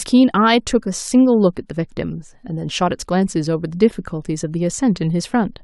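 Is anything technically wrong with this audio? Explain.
No, nothing technically wrong can be heard here.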